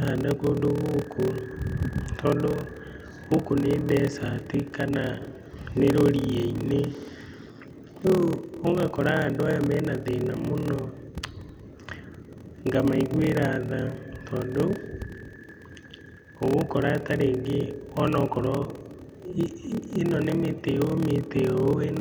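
Throughout, a block size mismatch (padded) zero-fills each block's tail, causing a steady 38.3 Hz buzz and speech slowed to 0.889× with its timbre intact, unlike irregular dropouts.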